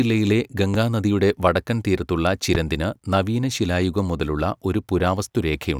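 At 0.74 to 0.77 s, a loud pop cuts across the speech. It peaks roughly 10 dB above the signal. A second loud pop follows at 2.55 to 2.57 s, stronger, at about 15 dB above. Each is a single sharp click lasting a few hundredths of a second. The speech runs on beneath both. The likely cause is a brief voltage spike, such as from a switch, static or a driver glitch, entering the signal chain.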